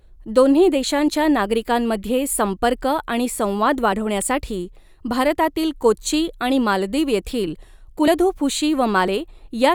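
Skips at 3.93 s, 8.08 s and 9.08 s jump the speech forward. Each is likely a dropped buffer (overrun), losing about 10, 30 and 30 ms.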